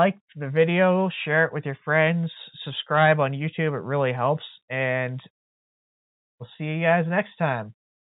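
No technical faults can be heard in the speech. It is carried over G.711 mu-law telephone coding, so nothing above 4 kHz comes through and a faint quantisation hiss rises and falls with the speech level.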